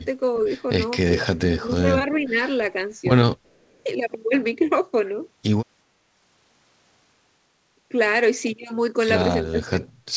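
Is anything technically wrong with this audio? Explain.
Yes. Three echo-canceller behaviours are audible, and the call path is also audible in the lack of any content above 8 kHz, which fits a G.722 link at 64 kbps.

Speech suppressed in double talk, 1.47 to 2.43 s and 9.5 to 9.88 s: with both ends likely talking at once, the canceller could not tell the near talker from loudspeaker echo and pulled everything down. The speech dips by roughly 10 dB over about 0.7 s in the first stretch, and by roughly 20 dB over about 0.3 s near the end.

Echo leak, 3.45 to 3.83 s: one side's canceller likely failed to remove all of its loudspeaker pickup, so a faint copy of the voice comes back 387 ms late. It sits around 40 dB below the speech.

Background gated by the echo canceller, 3.69 to 3.78 s: while the loudspeaker was active, the canceller clamped the microphone. The room sound drops by about 12 dB for roughly 70 ms and then returns.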